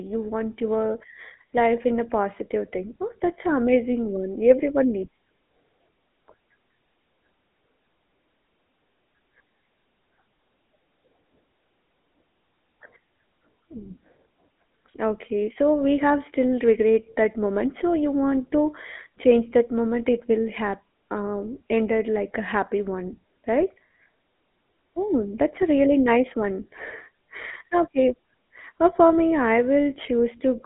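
From start to finish the speech carries the damage of the GSM full-rate codec, plainly audible. The codec models the vocal tract as a filter and feeds it a coarse pulse-train excitation that retains only one sample in three, so voiced sounds turn buzzy and gravelly. The band runs from about 200 Hz to 3.5 kHz, with nothing above 3.8 kHz, giving a narrow telephone character consistent with the 13 kbps full-rate mode.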